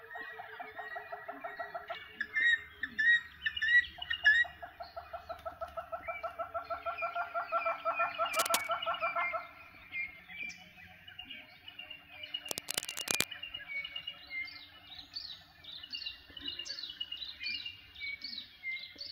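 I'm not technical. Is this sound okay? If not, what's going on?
No. Twice, at 8.34 to 8.67 seconds and 12.48 to 13.26 seconds, a harsh scratching, rustling burst cuts in, about as loud as the sound itself. This is cable scratch noise, likely from a worn cable or plug being moved during recording.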